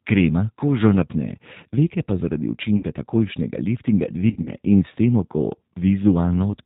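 The whole clip runs through the G.729 codec at 8 kbit/s. Nothing above 4 kHz survives, and the speech sounds plainly rough and synthetic. At 2.77 to 2.85 s, packet loss concealed by the speech codec fills a 60 ms gap, which fits three lost packets, with a fading buzzy tone or coloured noise. From 4.30 to 4.49 s, 80 ms of losses are scattered across 160 ms, in runs up to 40 ms, leaving the speech weak or distorted.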